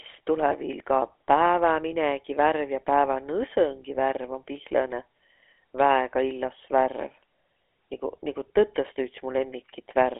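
From start to finish the speech carries GSM full-rate codec damage: a buzzy, gravelly roughness from coarse pulse-driven excitation, consistent with a 13 kbps coder. A spectrogram shows nothing below 300 Hz or above 3.4 kHz, and smeared, grainy harmonics between.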